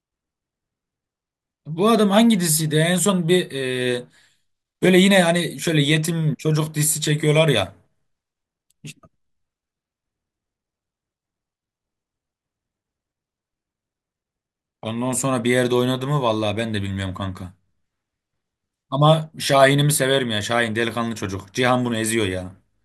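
No technical faults are audible anywhere in this recording.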